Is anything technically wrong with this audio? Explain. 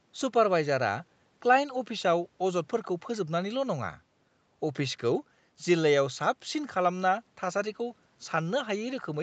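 No, nothing stood out on listening to this speech recording.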